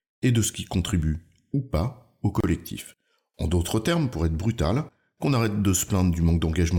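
At 2.40 to 2.44 s, just after "ou pas au", a gap at a join of encoded pieces cuts the speech for about 32 ms. Separately encoded segments, about 4 s long, were joined with their padding left in. The spectrogram shows a narrow blank column with smeared edges, and the waveform drops to near-flat before the speech resumes.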